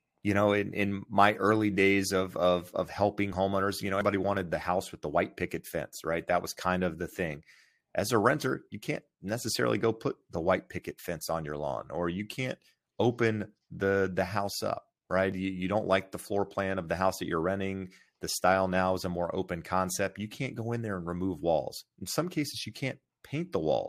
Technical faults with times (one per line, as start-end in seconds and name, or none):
15.32 overlap between stream segments